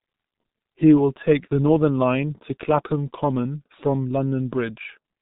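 Muffled, hoarse speech runs from start to finish, with consonants smeared into one another and no brightness or air at all, since nothing above 3.8 kHz survives. This is the G.723.1 codec applied throughout, and the damage is heavy. Its 30 ms frames update the voice model too slowly to follow quick articulation, and the coarse, rasping texture fits a rate of around 6.3 kbit/s.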